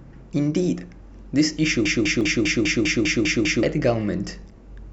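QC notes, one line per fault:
1.85–3.63 s, broken-record loop: a roughly 200 ms fragment repeats back to back nine times, identical each pass, and the sound that should have followed is lost. The likely cause is a stalled player or stream resending the last fragment it held.
2.21 s and 4.51 s, damaged data in a compressed stream: two brief blips, each a few milliseconds long. Corrupted bytes made the decoder misread frames, lose sync and search for the next frame header, which produces the short glitch.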